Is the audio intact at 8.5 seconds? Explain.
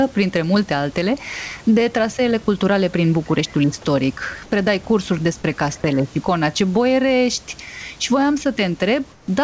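No. Gain pumping runs through the whole clip, 8.5 s included: loud and soft parts end up closer in level and the sound is squashed, with the level swinging somewhere around ten decibels. That's likely input gain set far too high, with a fast limiter clamping down every time.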